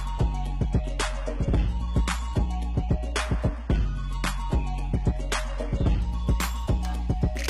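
An adaptive stream starting at a low bitrate: the player opened on a very lean encoding, which sounds like roughly 16 kbit/s HE-AAC, then stepped up near 6.0 s. Until then the audio carries nothing above 11.8 kHz and heavier codec artefacts, and it brightens abruptly without any gap.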